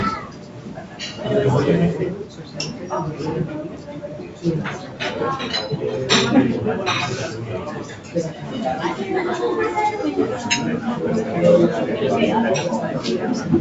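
A speech-tuned noise suppressor stays active for the whole clip, treating steady and fading parts of the sound as noise. Its gain swings by around 10 dB, so the level pumps while onsets punch through and sustained material thins out.

The suppressor's cuts are clearest at 0.22–1.0 s, 2.25–2.87 s, 3.68–4.08 s, 4.24–4.44 s, 4.82–5.0 s, 7.82–8.15 s and 8.31–8.51 s. In each stretch the sound sinks by about 5 to 6 dB and decays are clipped short, while the call path's normal ceiling near 8 kHz remains steady.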